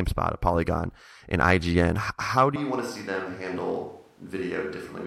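At 2.56 s, right after "how do", the sound turns roomy and hollow, drops about 10 dB, loses bass and gains room noise to the end: likely a switch to a distant microphone. Unlike added reverb or fading, it changes instantly.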